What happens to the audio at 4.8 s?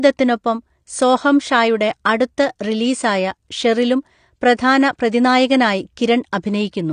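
Throughout, including 4.8 s, likely AAC compression at a low bitrate (the damage fits about 32 kbps) removes everything above 9.7 kHz and coarsely quantises the rest. The speech sounds dull, smeared and warbly.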